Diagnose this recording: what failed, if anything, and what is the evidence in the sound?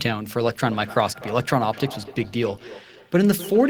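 What failed is call processing, specifically feedback echo between two devices. From 0.49 s to the end, the speech comes back roughly every 300 ms at about 17 dB below the direct sound. A second device in the room replays this microphone's feed, which gets picked up again, and neither echo canceller catches the other's playback.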